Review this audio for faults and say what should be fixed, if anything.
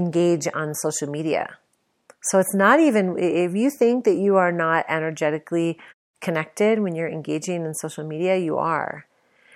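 Nothing here needs fixing: the speech signal is free of distortion or other technical faults to correct, and the quiet background dropping out in longer pauses is normal muting.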